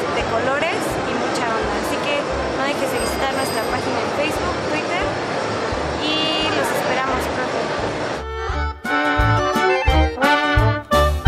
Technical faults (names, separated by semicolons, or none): none